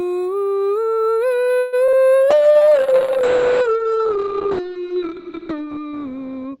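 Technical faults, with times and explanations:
Throughout, video or display buzz: a low buzz at 59.94 Hz, the picture's field rate, sits under the music with a fizzy hash above it and a thin whistle at 15.7 kHz, the line-scan rate. It stays roughly 45 dB below the music, so it is faint but constant. A screen or video cable is coupling its scanning currents into the audio path, and the music carries that interference from start to finish.
1.59 to 1.75 s, call audio freeze: the music stops moving forward for about 132 ms. The last sound is stretched into a fading buzzy hang and never drops to silence. The music then resumes exactly where it halted, with nothing skipped, and sits about 132 ms later than before. The likely cause is delayed packets draining the jitter buffer, which forced the receiver to extend the last sound until the packets arrived.
1.87 to 1.90 s and 1.92 to 1.95 s, short concealed packet loss: two brief smears sit about 50 ms apart. 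In each, roughly 20 ms of the music never arrives in time. The receiver covers the hole with about 10 ms of continued sound and then blends back into the real signal. The result is a quick smear or wobble.
2.32 s to the end, call bitrate drop: the encoder falls from 32 kbps to 6 kbps and stays at the bottom for about 2.5 s. At that rate Opus codes the music far more coarsely, which makes it rough and watery. The audio bandwidth also shrinks from 20 kHz to 8 kHz, so bright detail goes dull and muffled. This follows a collapse in the call's bandwidth estimate.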